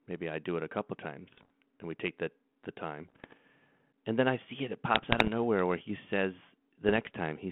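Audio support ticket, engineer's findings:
Bit errors on an ADPCM link: pops and rough, gritty bursts at 1.32–1.50 s, 3.08–3.37 s, 4.94–5.28 s and 6.89–7.11 s. Probable component is the G.726 link at 32 kbit/s, band 150 Hz to 3.4 kHz. Flipped bits corrupt the decoder's step size and predictor, so each hit smears on briefly with level jumps, at an error rate of roughly a percent or less. Unlike packet loss, there are no silent gaps or repeated fragments.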